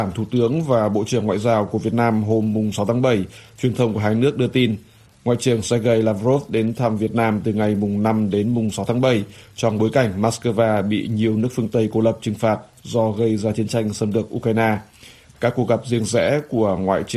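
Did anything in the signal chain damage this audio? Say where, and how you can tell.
No, nothing in the signal chain audibly damaged this audio. At no point can a listener hear damage from any stage.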